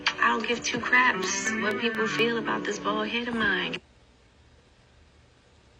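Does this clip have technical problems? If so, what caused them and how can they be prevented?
Yes. A train of clicks runs from 1.24 to 2.20 s: about five similar pops at a steady 4.2 per second, standing well above the surrounding sound. The likely cause is interference from nearby equipment or a faulty connection or power supply injecting pulses. On a waveform they show as evenly spaced sharp spikes; on a spectrogram, as thin vertical lines spanning all frequencies. Shielding cables, moving away from noisy devices and using a stable, properly powered interface would prevent this.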